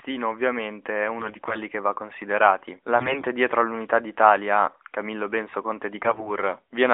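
AMR bit errors at 1.20–1.62 s, after "ovviamente è" and before "che va considerati", then at 2.96–3.26 s before "dietro all'unità", and again at 6.05–6.30 s. Flipped bits in the weakly protected parts of the AMR frames slip past the checksum and corrupt the pulse positions and fine gain and spectral values. The speech keeps its rough pitch and level but turns hoarse and gargly, harshest in the middle burst, where the error rate sounds closer to a tenth of the bits. All of this sits within the narrowband phone band of roughly 250 Hz to 3.6 kHz.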